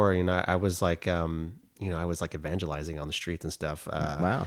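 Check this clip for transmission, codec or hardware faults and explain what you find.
Nothing stood out on listening to this speech recording.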